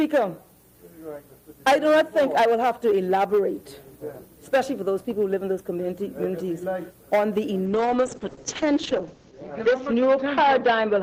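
At 7.66 s a call bitrate drop sets in and lasts until the end of the clip. The encoder's bit budget collapses, and the sound fits a fall from roughly 32 kbps to about 8 kbps, bottoming out for around 1.6 s. Coding becomes coarse and grainy, with a watery texture, and the audio bandwidth narrows from 20 kHz to 8 kHz, cutting off the upper range and leaving a muffled, dull quality.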